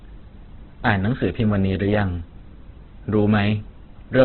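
From start to finish the speech sounds rough, grainy and noisy at the edges of its tones, and nothing reaches above 4.3 kHz. This is likely Opus compression in its music mode, starved of bits, with heavy damage consistent with a 12 kbps stream.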